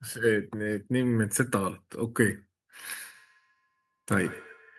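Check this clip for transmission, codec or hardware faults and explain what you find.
There is one fault, a feedback echo between two devices. From 2.95 s to the end of the speech, each word returns roughly every 150 ms, peaking about 19 dB below the speech. A second device in the room replays the stream into the microphone, and the microphone's own echo canceller cannot remove it, since it only removes what its own device plays.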